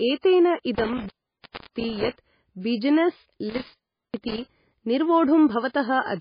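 From the start and throughout the speech, the sound is watery and swirly, with smeared attacks and nothing above 5 kHz. That is heavy damage from what is likely MP3 compression at a very low bitrate, something around 18 kbps. Starved of bits, the encoder drops weak frequency lines frame by frame and cuts the treble. On a spectrogram the top is sliced flat at 5 kHz, with patchy, flickering blocks of energy below it.

From 0.75 to 2.08 s an intermittent contact breaks up the audio. A loose connection opens for about 660 ms in total, so the sound drops out with crackle at the edges and hiss while the line is open. The same happens from 3.49 to 4.41 s, with the line open for about 370 ms. In the waveform these show as gaps flanked by sharp spikes. On a spectrogram they appear as empty or noise-only stretches bounded by thin vertical lines.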